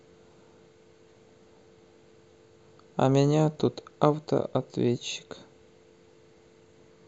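DAB burbling interrupts the speech three times: from 1.17 to 1.29 s, from 3.57 to 3.79 s, and from 6.38 to 6.45 s. Weak reception lets bit errors slip past error correction into the MP2 data, which fits a bit error rate of a few tenths of a percent. Corrupted samples put short blips of noise in single sub-bands, and corrupted scale factors make sub-bands jump in level for up to a frame.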